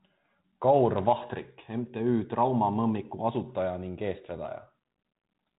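Nothing stood out on listening to this speech; the only audible trait is the narrow telephone band of its 32 kbit/s G.726 coding, with nothing above about 3.8 kHz.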